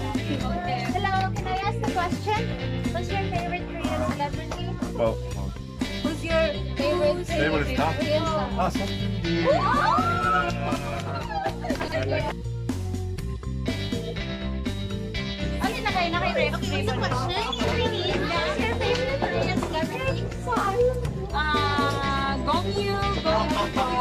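At 11.8 s the sound briefly garbles into a jumbled stutter lasting to 11.92 s, and a shorter version recurs from 17.64 to 17.72 s. Both are chunks out of order. The audio travels in 40 ms chunks. In the first event one chunk arrived two places late, and in the second one chunk arrived one place late. Nothing is lost, but the shuffled chunks meet at hard joins.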